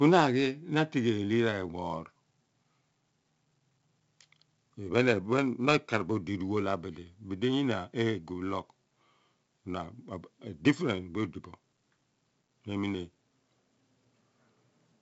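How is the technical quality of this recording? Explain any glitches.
The recording is speech with one fault present throughout: heavy 4-bit ADPCM compression. Nothing is heard above 7.7 kHz, and the coding noise is evident across the whole clip.

4-bit ADPCM compression, throughout: each sample is coded as a small step from a predicted value, so the error becomes broadband grit that rises and falls with the speech, which fits 64 kbps. Unlike steady background hiss, it disappears in pauses.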